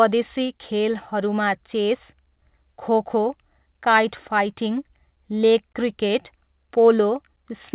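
Nothing in the speech stood out as a fault on listening; it has the narrow telephone-band sound of a call line, with nothing above 4 kHz.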